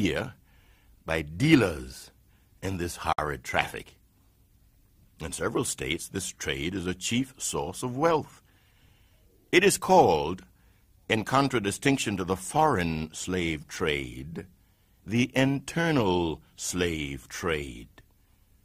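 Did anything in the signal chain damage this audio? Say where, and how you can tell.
Yes. There is a gap at a join of encoded pieces, a codec and storage fault, from 3.13 to 3.18 s, just after "by dealers in this". The speech stops dead for about 54 ms, with edges smeared, then resumes exactly where it left off. Separately encoded segments were concatenated untrimmed, leaving encoder start delay and last-frame padding as silence. Unlike a network dropout, no sound is lost or concealed; silence is simply inserted.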